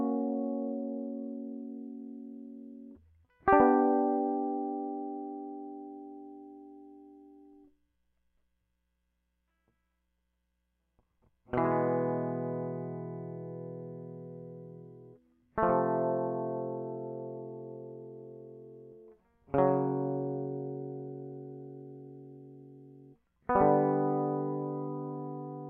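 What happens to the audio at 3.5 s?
Nothing goes wrong at 3.5 s; the music plays through that moment intact, with no dropout, click or other fault.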